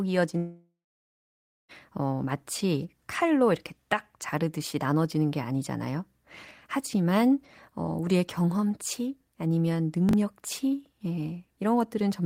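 From 0.37 s to 1.72 s the audio breaks off. The last sound is stretched into a fading buzz or hiss, then about 0.97 s of near-silence follows before the audio resumes with roughly 1.3 s of material simply gone. This is most likely a long network dropout: no packets arrived, the receiver concealed the gap by extending what it last had, and playback rejoined the stream further on without the lost stretch.

At 6.44–6.51 s and again at 10.09–10.13 s there is a brief jumbled moment, the signature of chunks out of order. A block of about 21.33 ms arrives or is written late and plays after the blocks that should follow it. That leaves three hard joins and a small scrambled section. The first event sounds like a block displaced by two positions, the second by one.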